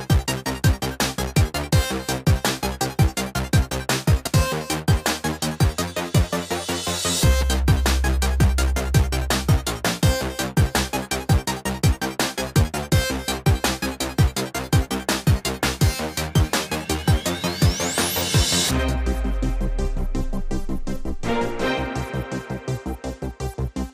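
At 4.27 s the audio jumps straight ahead with no gap, losing roughly a third of a second of sound. That points to a dropped buffer (overrun): the program likely failed to collect its samples before the hardware overwrote them, leaving the surrounding audio spliced together.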